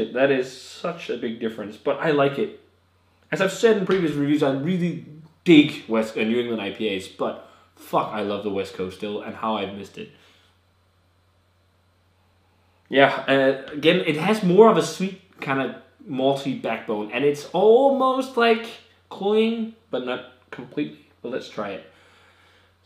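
No technical faults can be heard anywhere in this audio.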